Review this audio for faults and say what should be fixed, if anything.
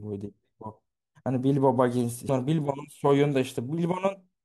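A brief glitch at 2.29 s comes from damaged data in a compressed stream: corrupted bytes made the decoder misread that frame and lose sync until it found the next header. Verifying transfers with checksums and re-fetching corrupted segments prevents it.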